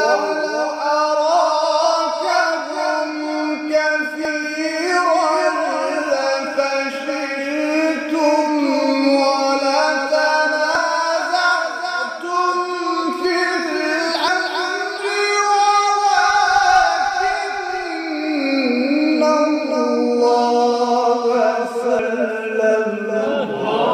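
The audio jumps forward four times, at 4.25, 10.75, 14.28 and 21.99 s, a sign of compressed frames skipped. Whole frames of roughly 93 ms each are never played, so the sound loses about a tenth of a second, then about a fifth twice, then nearly half a second. Unlike a dropout there is no silent gap.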